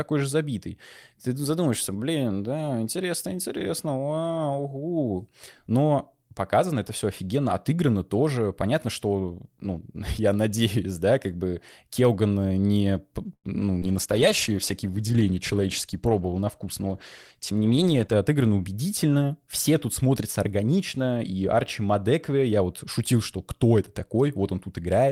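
Recorded speech from a call, with a cluster of network faults between 13.3 and 18.3 seconds. The first is a call audio freeze from 13.33 to 13.47 s. The sound stalls for about 0.1 s. The receiver stretches the last sound into a fading tail, and the final 70 ms is plain silence. Then the speech resumes where it stopped. Nothing is lost, but the gap adds about 100 ms of delay. Late packets that drained the jitter buffer are the likely cause. Next comes a short concealed packet loss at 13.80 to 13.85 s. Only 20 ms of made-up sound covers the hole, while about 60 ms of real speech is gone. The receiver extends the last sound briefly, then blends back in. The result is a quick smear or wobble, and a short sound there may vanish. The skip also cuts the delay by roughly 40 ms. A call bitrate drop follows at 13.85 s and lasts until 18.27 s. The encoder falls from 32 to 14 kbps, and stays at the low rate for about 4.4 s. 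Fewer bits mean coarser coding and a narrower band. The speech turns rough and muffled, with a watery edge, until the rate recovers. Within that stretch, a jitter buffer slow-down runs from 14.49 to 14.92 s. The receiver repeats single pitch periods and pause fragments to rebuild its reserve. This adds 40 ms and plays the audio at 93 percent speed. Pitch stays the same, so sounds seem drawn out, with a slight warble possible. Finally, a jitter buffer speed-up appears from 16.20 to 16.89 s. Too much audio had piled up in the buffer. The receiver trims short pitch-period pieces, removing roughly 100 ms in total. Playback runs at 111 percent speed at an unchanged pitch. The speech sounds hurried over that span.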